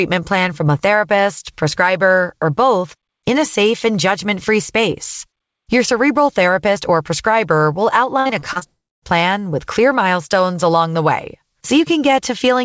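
From 8.20 to 8.63 s the speech turns choppy and robotic: repeated packet loss opens five short holes, the longest 54 ms, and about 30% of that stretch is filled by stretching the preceding sound. On a spectrogram the harmonics smear flat across each patch, with small notches in the waveform.

From 8.67 to 9.04 s, just before "plan with clear milestones", comes a fading buzz that drops into about 0.27 s of silence, likely a long network dropout. The waveform flattens to nothing and the spectrogram shows a blank column, under the band-limit at 8 kHz.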